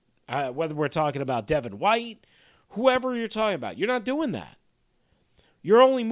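Nothing in the recording stood out as a technical fault on listening.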